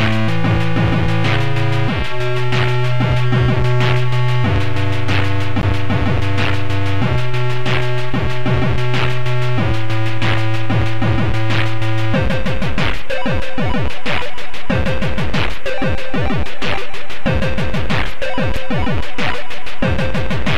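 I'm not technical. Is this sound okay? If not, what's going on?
No. There are two brief blocks of digital silence, at about 5.61 s and 18.56 s. At each one, a slice of the sound is replaced by complete nothing, roughly 16 ms the first time and 6 ms the second, most likely because the playback program didn't get its next chunk of audio ready in time. Because the sound stops and restarts abruptly rather than fading, each gap comes across as a sharp tick. That abrupt, fully silent cut is what separates it from a fault that only weakens or blurs the sound.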